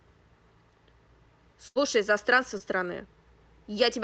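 At 1.67 s there's a burst of packet loss running to about 1.78 s: roughly 80 ms of the call never arrived in time, so the receiver stretched the last sound out as a fading buzz or hiss, then jumped ahead with that stretch simply gone. Then at 2.58 to 2.62 s comes a short concealed packet loss, only about 20 ms missing. The decoder papered over it by extending what came just before and blending back in, so you get a quick smear or wobble. Both ride on a call path whose top end stops around 8 kHz, which fits Opus at a modest bitrate.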